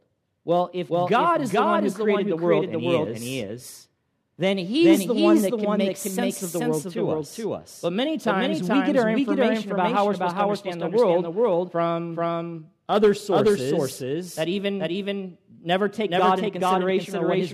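All the way through, the speech has a doubled audio track: a second copy lands roughly 400 ms behind at about the same level, likely from a duplicate capture path.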